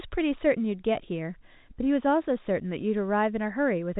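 Nothing stood out on listening to this speech, which carries the narrow telephone band of G.711 coding with nothing above about 3.8 kHz.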